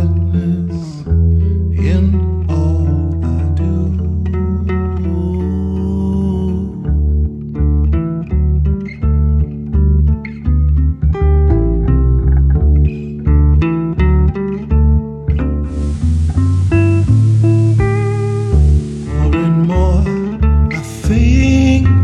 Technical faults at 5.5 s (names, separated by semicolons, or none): none